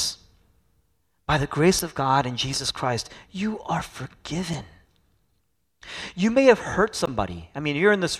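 Damaged data in a compressed stream breaks this speech three times. At those points the decoder hits corrupted bytes, misreads or rejects the affected frames, loses sync and has to hunt for the next valid frame header. Each break comes out as a brief chirp, squawk, click or short hole cutting across the speech, lasting 20 to 30 milliseconds: from 1.79 to 1.81 s, from 4.53 to 4.55 s, and from 7.05 to 7.09 s.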